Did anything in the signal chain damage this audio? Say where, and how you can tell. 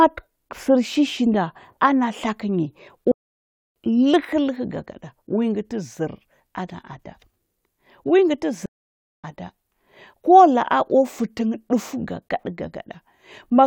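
Yes, at the playback stage. The speech cuts to silence from 3.12 to 3.76 s (640 ms) and from 8.66 to 9.24 s (578 ms). These are playback stalls, likely from a starved buffer or blocked player thread. The waveform drops to a flat line, and the spectrogram shows blank vertical bands.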